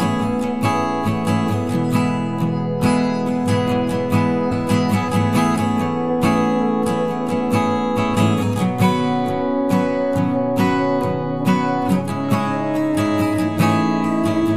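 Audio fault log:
4.51 s, damaged data in a compressed stream: a very short glitch breaks into the sound as the decoder hits corrupted bytes, misreads the frame there and has to hunt for the next valid frame header before it regains sync. On a waveform it appears as a sliver of disrupted samples lasting under 20 ms. A spectrogram shows a thin vertical break that cuts across the surrounding pattern.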